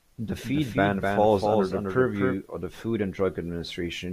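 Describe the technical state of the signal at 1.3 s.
At 1.3 s the speech is affected by a doubled audio track, which runs from 0.44 s to 2.34 s. A second full-band copy of the same speech trails the original by roughly 300 ms and sits a few decibels lower. The likely cause is a slower capture path or an edit holding two copies out of step. The copy has no decay or room colouring, so it sounds like a detached slapback rather than reverberation, and it starts and stops abruptly at the span edges.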